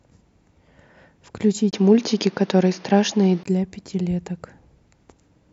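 At 1.71 s there's a brief 20 ms gap, then the speech turns dull and boxy with nothing above 6.7 kHz, shifts in level by a few dB, and gains a new faint noise floor until 3.45 s. That's likely an input switched to a poorer device.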